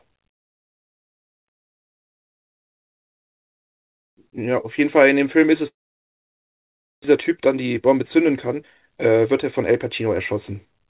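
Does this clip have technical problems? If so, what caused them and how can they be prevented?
Yes. From 5.68 to 7.06 s a long network dropout leaves about 1.3 s of silence in place of roughly a second of lost speech, likely from packets that never arrived. Unlike a brief concealed gap, the fill fades quickly into silence. Prevent it with a more stable connection or redundancy such as forward error correction.

From 7.16 to 10.73 s a jitter buffer speed-up plays the speech about 10% fast, trimming roughly 0.4 s of pitch periods after the buffer had filled beyond its target. The pitch stays the same, which separates it from a sped-up playback clock. Steadier network delay keeps the buffer from overfilling.

The call path's 4 kHz band limit, consistent with G.711, is normal for this codec.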